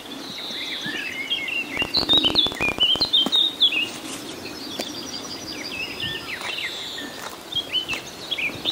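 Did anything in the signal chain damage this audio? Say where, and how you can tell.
Yes. From 1.77 to 3.06 s a train of clicks ticks over the sound at an uneven pace, near 20 per second, around thirty in all, each popping roughly 15 dB above the signal. This likely points to interference coupling into the analogue wiring.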